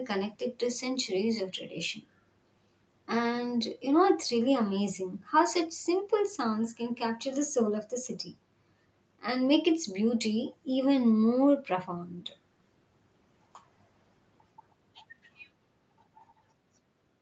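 No faults are audible in the speech; the top end stops near 8 kHz, as expected from the call microphone processing and the Opus codec on the WebRTC call path, which fits a wideband call setting.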